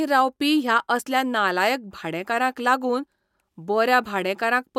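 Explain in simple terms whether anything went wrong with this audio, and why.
Nothing went wrong here.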